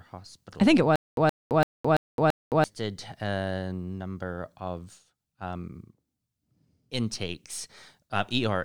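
From 0.96 s to 2.64 s the speech breaks into a stutter with silent gaps. A fragment about 122 ms long plays, then silence of about 215 ms follows, and the pair repeats on an even 337 ms cycle, five times in all. The pattern most likely comes from a stalled player or stream that replayed its last buffered fragment at each retry before running dry, so the audio that belonged in that span is missing.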